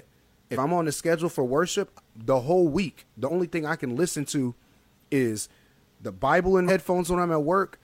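At 0.51 s, just before "I'm on the schedule", compressed frames are skipped: the speech jumps ahead by about 50 ms, which fits one frame of roughly 46 ms going missing or being rejected by the decoder. The same thing happens at 3.25 s, between "the whole week" and "thing I can listen". At 6.64 s it's bigger, about four frames and around 200 ms gone.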